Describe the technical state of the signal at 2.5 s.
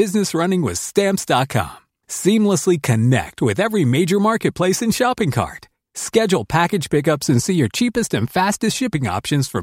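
At 2.5 s the speech signal is intact, with no audible technical fault at that point.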